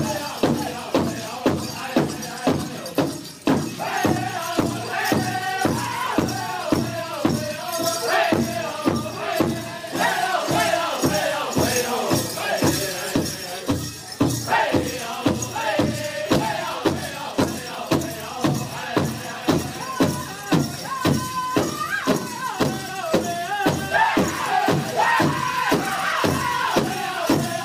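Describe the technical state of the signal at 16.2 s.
At 16.2 s the signal is intact, with no dropout, distortion, glitch or other fault.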